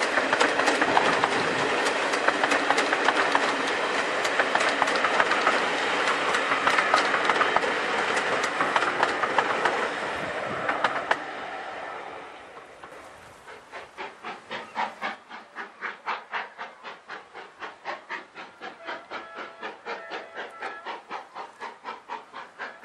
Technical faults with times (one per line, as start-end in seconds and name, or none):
none